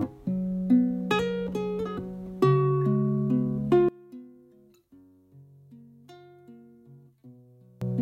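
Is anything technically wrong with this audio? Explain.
Yes. From 3.89 s to 7.81 s the sound collapses by about 27 dB into a faint residue, most likely from one channel inverted: reversed polarity cancels the shared centre in mono. A plain gain drop would keep the full tone, only quieter.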